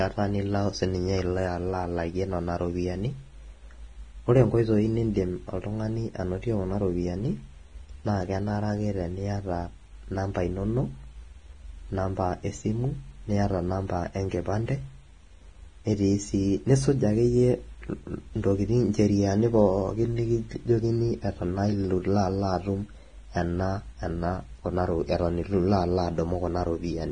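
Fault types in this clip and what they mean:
Vorbis compression: the speech runs through the whole clip with a hard ceiling near 9.7 kHz and heavy grainy hiss, roughened tones and smeared consonant onsets, likely from low-bitrate Vorbis around 24 kbps; unlike a plain low-pass filter, the remaining treble is noisy rather than clean.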